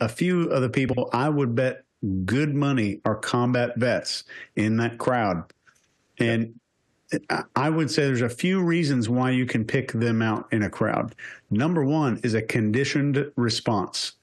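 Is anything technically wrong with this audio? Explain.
Yes. Frames out of order at 0.88–0.98 s and 7.36–7.42 s: two adjacent blocks, about 46 ms then 23 ms each, swapped and decoded as delivered. Each stretch flutters. The waveform shows discontinuities there and the spectrogram vertical lines, with no gap.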